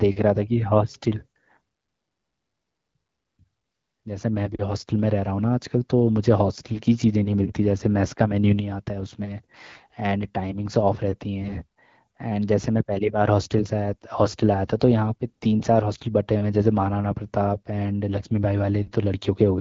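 AMR bit errors hit at 6.55–6.79 s, 9.72–9.96 s and 11.42–11.54 s. About 7 to 10 percent of the weakly protected bits in the wideband AMR-WB frames arrive flipped, misplacing excitation pulses and skewing pitch, gain and spectral detail. Level and pitch roughly hold, but the speech turns hoarse, scratchy and gargly.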